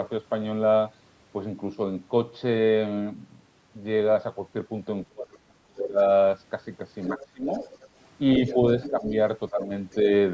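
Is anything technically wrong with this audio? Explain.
Yes. This speech has two kinds of fault from a call's echo control.

Speech suppressed in double talk occurs from 5.09 to 6.0 s, 7.13 to 7.62 s and 8.39 to 10.11 s. The talker's level drops sharply, by roughly 30 dB at worst in the first stretch, and only mildly in the last. The likely cause is an echo canceller that could not tell the talker from loudspeaker echo and turned both down.

The other side's voice leaking through is heard from 7.03 to 7.85 s, 8.46 to 9.1 s, and briefly at 9.91 to 9.96 s. A second voice sits under the talker, around 15 dB quieter in the first two stretches and far fainter in the last scrap. This is likely loudspeaker playback reaching the microphone that the echo canceller failed to remove.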